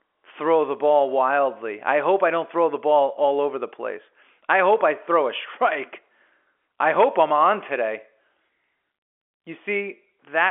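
Nothing stood out on listening to this speech, which carries the narrow band of an ordinary G.711 telephone line.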